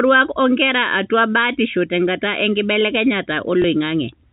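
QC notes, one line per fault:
3.62–3.64 s: packet loss with last packet repeated. A 20 ms gap, which fits one lost packet, is filled by replaying the preceding audio, giving a small blip.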